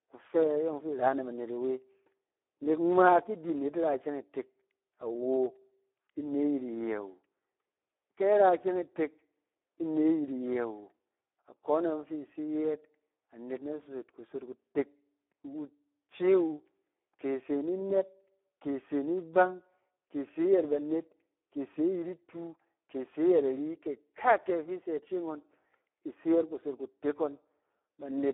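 Speex codec damage runs through the whole recording, from start to finish. The speech has been squeezed through a CELP coder with very few bits left for the excitation signal, and the heavy hoarse, noisy roughness points to a low setting of around 8 kbps. The sound is confined to a narrow line band of roughly 300 Hz to 3.5 kHz, with nothing above 3.8 kHz, giving a thin, boxy, telephone-like quality that edges toward robotic.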